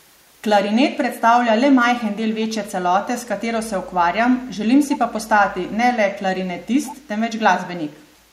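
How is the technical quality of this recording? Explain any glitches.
One glitch. From 6.86 to 6.95 s there is an echo leak. A faint copy of the speech returns 129 ms late, likely from a far-end loudspeaker's echo canceller missing some pickup.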